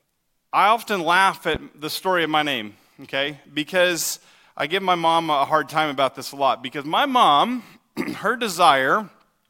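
Around 1.55 to 1.58 s a single loud pop jumps a few dB above the speech, likely a voltage spike; the speech carries on underneath.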